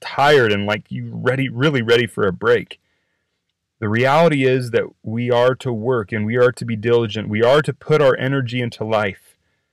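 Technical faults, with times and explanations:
Throughout, hard clipping: speech drives the signal about 7 dB past the stage's limit, flattening a small fraction of peaks into crackle.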